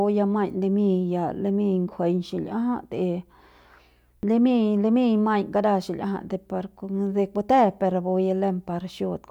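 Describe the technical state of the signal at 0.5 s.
At 0.5 s the signal is intact, with no audible fault.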